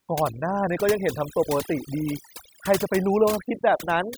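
From start to finish the speech carries overdone noise removal. The noise reducer was set too aggressively, pulling individual frequency bands down or out whenever they sat near its noise estimate. Quiet voice detail went too, leaving near-silent gaps with twinkling specks.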